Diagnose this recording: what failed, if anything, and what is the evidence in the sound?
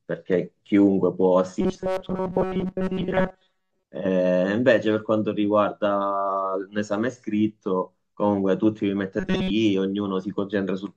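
The buffer stage was most likely starved of new audio, so playback kept looping a very short recent slice instead of real samples. The result is robotic sound from repeated short buffers from 1.61 to 3.84 s and again from 9.20 to 9.51 s. The speech collapses into a rigid, metallic buzz at 188 Hz, which fits a slice of about 5.3 ms. Most of the real audio in those spans is skipped, and the buzz only loosely tracks the syllables.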